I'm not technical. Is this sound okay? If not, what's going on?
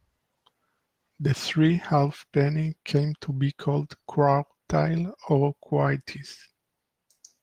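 Yes, it's fine: the speech has gone through Opus voice compression, the everyday kind used for calls and voice messages, and nothing in it needs fixing.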